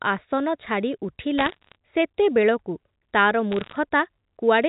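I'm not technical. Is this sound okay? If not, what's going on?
No. Bit errors on a digital phone line cause brief bursts of sharp ticking crackle from 1.38 to 1.75 s and 3.52 to 3.76 s, while the telephone-quality speech continues unbroken underneath, unlike a dropout.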